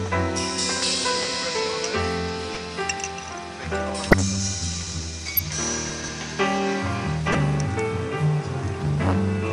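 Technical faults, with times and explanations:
2.54–2.57 s, 4.07–4.14 s, 5.36–5.39 s, 7.30–7.35 s, corrupt frame decoded: each is a brief chirp or squeaky burst of noise. The one at 4.07 s is the loudest, and the one at 2.54 s is the quietest. Flipped bits in one to a few compressed frames were decoded anyway, so misread gains and codes put energy at the wrong frequencies for roughly the length of the damaged frames.
4.83–4.92 s and 5.90–6.08 s, chunks out of order: each is a short jumbled, garbled moment. Blocks of about 46 ms were delivered or written late and played after audio that should have followed them. At 4.83 s one chunk is displaced by a single position, and at 5.90 s by three. No audio is missing, but the wrong order leaves hard splices.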